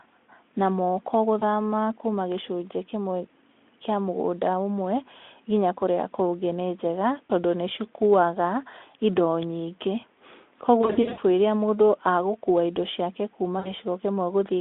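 At 1.39 s, 7.27 s, 10.81 to 11.20 s and 13.59 to 13.71 s the speech smears into a short buzzy tone or coloured noise that fades before recovering. This is VoIP packet loss concealed by the speech codec: the Speex decoder, narrowband at roughly 250 Hz to 3.5 kHz, fills missing audio by extrapolating its last pitch and filter at falling gain. The gaps are about 20, 40 and 60 ms, and at 10.81 s about 260 ms is lost over 0.36 s, the longest stretch 80 ms.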